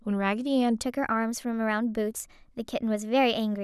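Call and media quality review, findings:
Section at the wrong speed, 0.8 s to end (3.63 s). Speech abruptly higher and hurried: about 1.13x speed, pitch up roughly two semitones. Likely a resampling or clock mismatch in playback or edit. Spectrogram: harmonic and formant bands step upward at 0.8 s. Waveform: syllable envelopes compressed in time.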